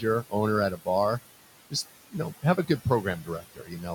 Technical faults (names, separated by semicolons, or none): noise suppressor artifacts; speech cut by the noise suppressor